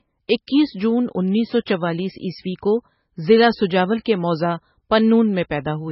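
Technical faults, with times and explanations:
Throughout, MP3 compression: likely a very low-bitrate encode around 16 kbps starving the encoder, so nothing survives above 5.6 kHz and the speech sounds dull, watery and swirly.
4.04 s, pre-echo: quantisation noise spread across the transform block leaks about 17 ms ahead of the attack after "کو ضلع سجاول", leaving a short hiss and softened onset before "کے موضع".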